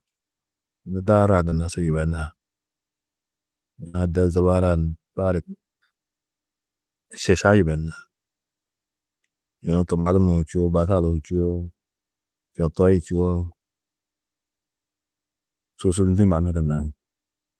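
Speech carried over a call path whose Opus coding stops the spectrum at about 12 kHz, heard as a flat ceiling on a spectrogram, and with two kinds of loss fault. Short concealed packet loss occurs at 1.49 to 1.54 s and 16.74 to 16.80 s, where about 20 ms and then about 40 ms of audio never arrived in time. The decoder extended the preceding sound and blended back, so each spot is a brief smear or wobble. On a spectrogram this shows as a short stretch of repeated, smoothed harmonics or noise; the waveform stays continuous but slightly too regular. A burst of packet loss at 3.88 to 3.96 s and 10.00 to 10.08 s drops about 60 ms each time. Concealment holds the last sound as a buzz or hiss that fades before speech resumes further on, with that section missing. A spectrogram shows frozen, decaying harmonic bands or noise, and the waveform envelope tapers before jumping back.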